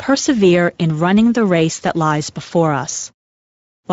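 Throughout the clip, the speech has passed through the Speex codec at a middle-to-low quality setting, consistent with roughly 16.8 kbps, leaving too few bits to model the excitation. The result is plainly audible coding damage: speech sounds noisy and hoarse from start to finish.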